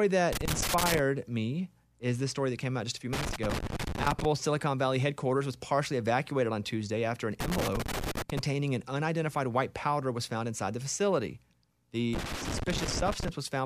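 Loose connector crackle breaks into the speech four times: 0.33 to 0.99 s, 3.13 to 4.25 s, 7.40 to 8.39 s, and 12.13 to 13.29 s. Each burst lasts between about 0.7 and 1.2 s. A worn or dirty contact is making and breaking as it shifts. The signal is chopped on and off in rapid, uneven bursts. It sounds like irregular scratching and crackle laid over the voice, then stops.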